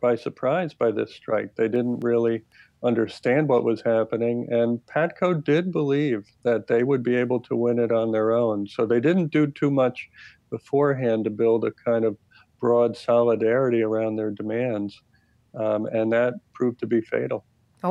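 From 1.76 s to 3.33 s there is a run of CD scratch ticks: seven short, regularly spaced clicks, roughly four per second. A blemish on the disc corrupted more data than error correction could rebuild on each rotation, so the player patched or muted those samples, leaving brief gaps a few milliseconds long. On a waveform each tick appears as a tiny notch or spike; a spectrogram shows evenly spaced thin vertical lines across all frequencies.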